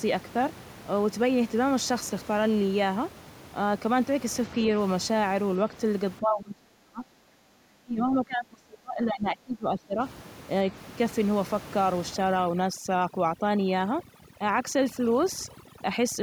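From 6.2 to 10.01 s the talker keeps dropping away, sinking by up to roughly 35 dB at the worst point and losing its top end, with pieces cutting out altogether over about four seconds in total. That's most likely speech suppressed in double talk: with both ends talking at once, the echo canceller couldn't tell this talker from the loudspeaker echo it was trying to remove, so it pulled everything down together.

Then from 12.15 s through to the end at 16.23 s, overdone noise removal takes over. Before that, the room noise sits about 18 dB under the speech, a normal part of the recording. Here the suppressor, set far too aggressively, starts switching individual frequency bands off whenever they look like its noise estimate. The background drops and breaks up into little twinkling specks, and the quieter parts of the speech get carved away with it.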